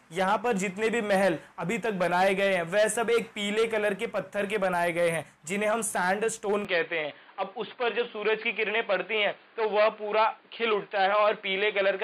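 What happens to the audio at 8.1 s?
At 8.1 s the sound is dull and boxy, with nothing above 4.8 kHz, from 6.65 s to the end. That is the signature of an input switched to a poorer device, likely a narrower-band microphone. Unlike a plain low-pass filter, it brings its own faint background noise, while the level stays steady with no gap at the switch.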